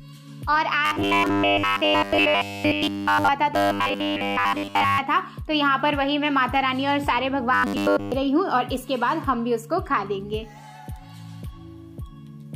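From 0.86 to 3.29 s, 3.54 to 4.98 s and 7.54 to 8.12 s, audio likely arrived too seldom, so 10 ms slices were replayed. The result is robotic sound from repeated short buffers: a rigid, metallic 100 Hz buzz, almost total in the first two spans and partial in the last.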